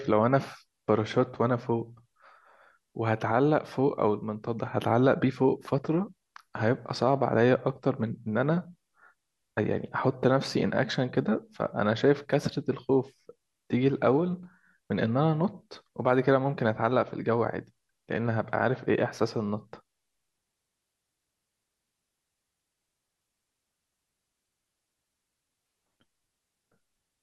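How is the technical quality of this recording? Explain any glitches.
No glitches or technical faults can be heard anywhere.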